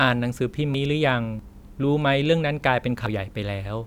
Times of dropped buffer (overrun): 0.74, 1.39, 3.06

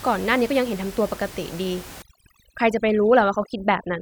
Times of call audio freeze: none

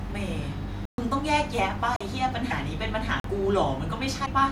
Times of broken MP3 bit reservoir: 2.50-2.53, 4.25-4.28

